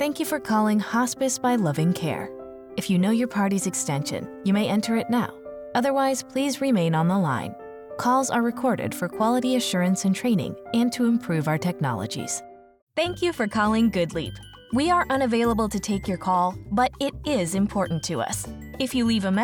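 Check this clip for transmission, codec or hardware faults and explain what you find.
Nothing here points to a transmission, codec or hardware problem, so there's nothing to flag in this clip.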